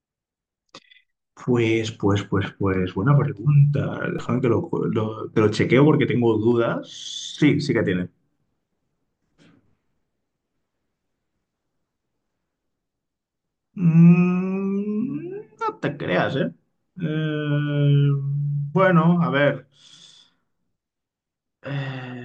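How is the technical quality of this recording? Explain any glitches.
The recording has one technical fault, a DC step at 4.19 s. At that instant the waveform's zero line abruptly shifts by about -32 dBFS, much as it would if a converter recalibrated or an offset input were switched into the path. The offset does not hold. It drains away through a high-pass around 2 Hz, settling within a fraction of a second. The sudden jump is heard as a single low thump beneath the speech, which carries on unaffected.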